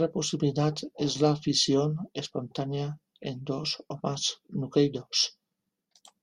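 Speech, with no technical faults to report.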